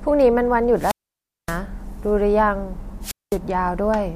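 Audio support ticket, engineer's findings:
Wireless microphone squelch dropout, 0.76 to 1.61 s and 3.01 to 3.39 s. Short hiss rise, then near-silent holes of 0.57 s and 0.21 s. FM receiver squelch muting on RF fade from the transmitter. Check antenna placement and transmitter battery.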